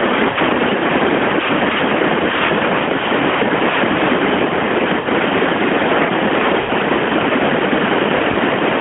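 Brief drawn-out, fading dropouts at 0.30–0.38, 5.00–5.09, 6.60–6.73 (the longest) and 8.32–8.38 s are lost AMR speech frames, concealed by repeating the last good frame with falling gain.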